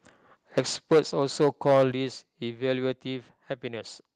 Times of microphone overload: 0.57-0.60, 0.91-0.99, 1.41-1.84

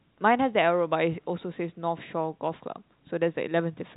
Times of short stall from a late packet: none

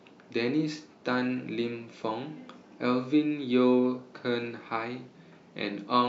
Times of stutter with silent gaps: none

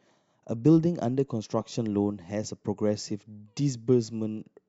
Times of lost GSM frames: none

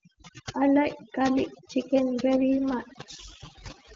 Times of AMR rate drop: 2.34-3.95

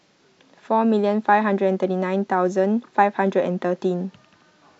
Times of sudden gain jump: none

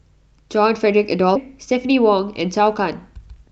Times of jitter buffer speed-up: 3.12-3.50

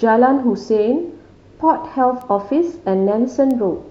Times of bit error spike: 2.21, 3.51

